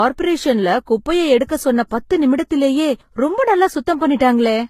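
Speech, with transcoding between lossy codecs throughout. Nothing is heard above 14.9 kHz. Layered artefacts suggest a low-rate HE-AAC encode, likely re-encoded to Vorbis afterwards.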